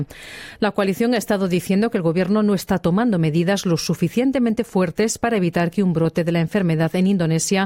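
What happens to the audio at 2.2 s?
Nothing goes wrong at 2.2 s; the audio plays through that moment intact, with no dropout, click or distortion.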